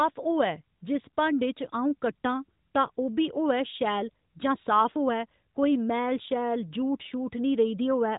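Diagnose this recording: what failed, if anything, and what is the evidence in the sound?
Nothing in this speech recording has failed at any stage. The band stops near 3.8 kHz with only light coding texture, as expected from a working AMR narrowband mobile codec at what sounds like its top 12.2 kbps mode.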